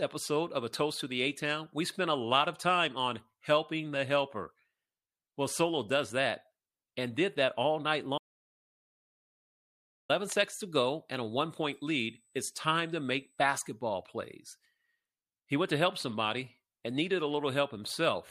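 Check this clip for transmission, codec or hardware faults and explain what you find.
Two faults are audible in this speech clip.

From 8.18 to 10.09 s, after "did that all night", the audio drops out to silence: about 1.9 s of silence with no room tone, resuming at "seconds to go and". The likely cause is a lost input while recording continued.

From 11.70 to 13.70 s, after "go and a one", a faint, steady 8 kHz tone sits roughly 40 dB below the speech. This is USB whine, with the 125-microsecond microframe rate of USB leaking in through power or ground.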